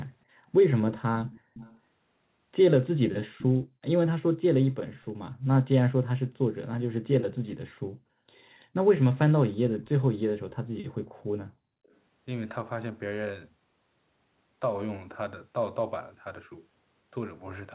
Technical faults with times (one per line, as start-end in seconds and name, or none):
1.25-1.78 echo leak
9.85-9.89 echo leak
11.84-11.93 echo leak